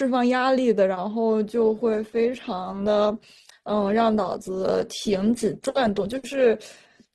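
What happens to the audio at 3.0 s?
At 3.0 s the stream is in the middle of an adaptive stream switch to a lower bitrate: the connection slowed, so from 1.46 s to the end of the clip playback runs on a leaner encoding, which fits a drop from Opus at 64 kbit/s to about 16 kbit/s. The speech picks up more codec artefacts. The quality changes abruptly at 1.46 s, with no gap.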